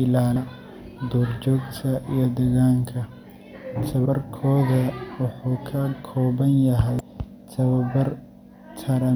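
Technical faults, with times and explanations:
0.35 s, 4.04–4.06 s and 6.99 s (just after "kooban yahay"): damaged data in a compressed stream. Each is a brief glitch lasting roughly 12 to 20 ms that cuts across the speech. Corrupted bytes in the encoded stream make the decoder misread the affected frames, so it outputs a short garbled burst, loses sync, and resumes only when it finds the next valid frame header.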